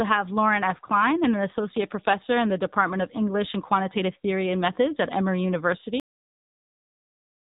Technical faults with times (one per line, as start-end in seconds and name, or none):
0.00-7.43 AMR narrowband mobile codec
6.00-7.43 cut-off end